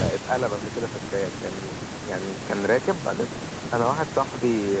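No technical faults are audible.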